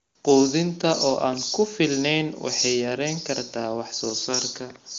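No technical faults occur at any point in this speech clip, which carries the limited top end expected of wideband phone audio.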